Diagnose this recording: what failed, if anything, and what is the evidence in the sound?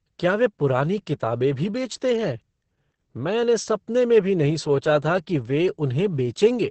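Opus voice compression throughout, a codec fault: nothing above 8.6 kHz, hoarse, slightly robotic speech, fitting SILK wideband near 10 kbps with coarsely coded excitation.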